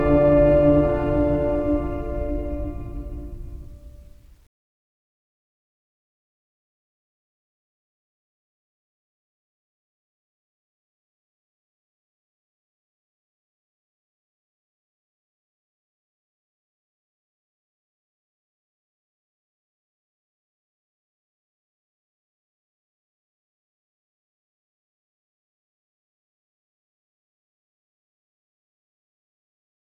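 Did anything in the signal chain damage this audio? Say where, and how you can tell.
No, nothing audible in the recording points to damage at any stage of the chain.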